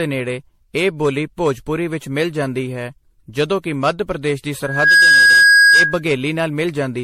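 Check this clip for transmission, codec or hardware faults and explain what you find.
Two problems here: a smeared, hollow codec sound over the whole speech clip, and a feedback squeal near the end.

Generation loss, throughout: it's swirly and hollow with soft attacks and nothing above 16.4 kHz. That's likely from around ten rounds of MP3 re-encoding, roughly at 64 kbit/s. Each pass requantises on a shifted frame grid, so the damage stacks up.

Loudspeaker feedback squeal, 4.63 to 6.02 s: a 1.6 kHz tone swells up over about a third of a second and sits around 10 dB above the speech. The mic was hearing its own speaker, and loop gain at that frequency went past one.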